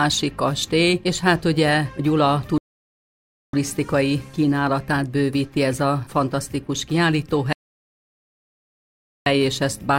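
At 2.58 s and again at 7.53 s the sound halts in a rebuffering stall, going silent for about 0.95 s and then 1.73 s while the player waits for data. Unlike a dropout, it resumes exactly where it stopped, adding time rather than losing audio.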